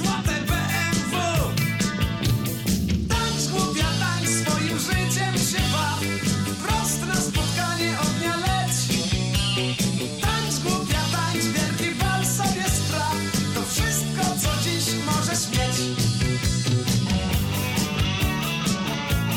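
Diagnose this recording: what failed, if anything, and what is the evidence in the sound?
Nothing failed in this recording, and the sound gives no evidence of a fault at any stage.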